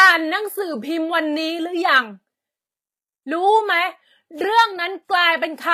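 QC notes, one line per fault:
Throughout: transcoding between lossy codecs. The speech carries two layers of coding damage at once. The artefacts of both codecs are heard together, one on top of the other. Nothing is heard above 20.9 kHz. This is likely an earlier WMA-style encode re-coded through HE-AAC. The later codec wastes its small budget reproducing the first codec's artefacts, then adds its own. The sound points to a final stage near 24 kbit/s.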